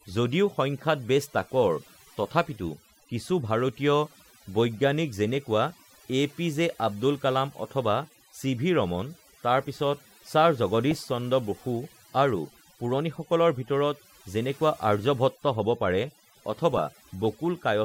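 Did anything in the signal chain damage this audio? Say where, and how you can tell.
Yes. Overdone noise removal affects the whole speech clip. The suppressor was set too hard, so it cuts bands near its noise estimate and takes quiet voice detail with them. The result is a near-silent, twinkling background. On a spectrogram the gaps show as black, with scattered isolated specks.

DAB burbling appears at 10.91–11.12 s and again at 16.72–17.07 s. The damage comes from the broadcast link. Uncorrected bit errors, fitting rates of roughly 0.1 and 0.15 percent, corrupt MP2 samples and scale factors. A spectrogram shows single sub-band blocks flashing bright for up to a frame.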